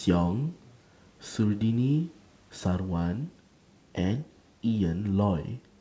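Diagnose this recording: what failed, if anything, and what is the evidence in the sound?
Nothing failed here: the speech comes through the call path with no fault to be heard, and the room noise sits far below it, at about 40 dB down.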